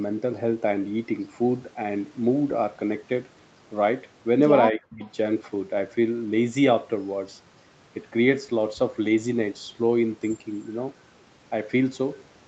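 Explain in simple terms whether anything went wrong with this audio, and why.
Speech suppressed in double talk, 4.72 to 5.03 s: the voice drops out almost completely, likely because both sides spoke together and the echo canceller turned everything down.

Echo leak, 5.0 to 5.11 s: a faint copy of the voice returns about 0.3 s late, likely because the echo canceller missed part of the loudspeaker sound.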